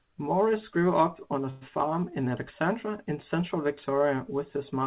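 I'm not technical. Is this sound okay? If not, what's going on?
No. From 1.50 to 1.63 s the speech briefly stalls into a fading buzz, then resumes exactly where it left off, just about 0.11 s late. That's a call audio freeze, likely from network packets arriving late. Unlike a dropout, nothing is lost; the speech is only paused. The phone-style call path limits the sound to below 4 kHz, which makes it sound like a telephone.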